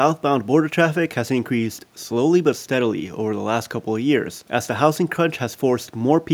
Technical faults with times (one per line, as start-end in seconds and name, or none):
none